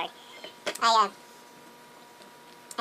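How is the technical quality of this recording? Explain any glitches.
The quality is poor from start to finish. The audio is read two samples at a time, so it plays at double speed. Throughout the clip, everything runs twice as fast and sits an octave higher, a shift of 12 semitones. The reader treats each pair of samples as a single frame. It acts as if there were two channels or samples twice as wide. Each frame uses up two samples, so the clip plays through in half the time, which doubles the speed and pitch.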